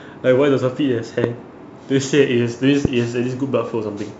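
A sharp loud pop cuts across the speech from 1.24 to 1.26 s, and another from 2.85 to 2.87 s, each standing about 15 dB above the speech while it continues underneath. Each is likely a brief voltage pulse, from a switch, static or a driver glitch, entering the signal path.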